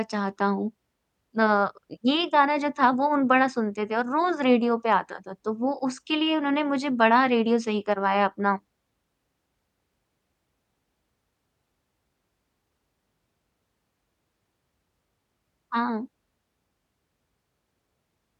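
No technical faults can be heard in this speech recording.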